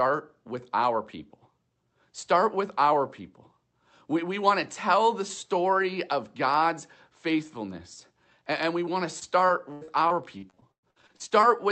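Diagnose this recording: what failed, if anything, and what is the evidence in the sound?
Network stage: repeated packet loss (robotic sound) from 9.19 to 11.45 s. The audio turns choppy, with gaps up to 110 ms, each patched by stretching out prior audio.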